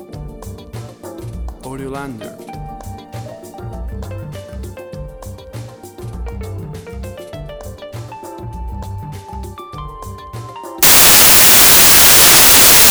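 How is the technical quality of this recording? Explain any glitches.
The recording has one clear fault near the end. From 10.83 s to the end, the samples are built from the wrong bytes. Misread low bits dominate each value. This gives loud, harsh broadband noise.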